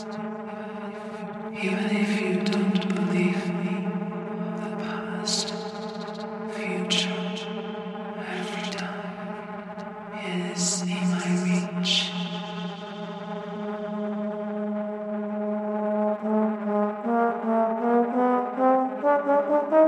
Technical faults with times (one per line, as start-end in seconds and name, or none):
none